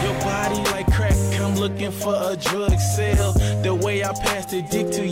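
The audio has light hard clipping throughout: it's driven about 1 dB too hot, so only a small fraction of the peaks get flattened, adding crackle on the loudest moments.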